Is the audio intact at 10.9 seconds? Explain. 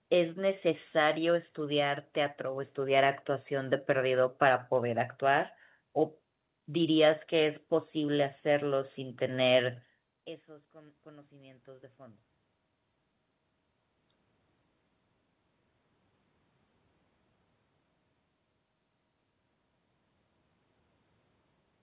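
No, not quite. At 10.9 seconds you're inside an automatic gain rise running from 10.46 to 12.28 s. The input dropped by about 24 dB as the talker moved back, so the gain control slowly pushes up about 4 dB, and voice and room noise swell together.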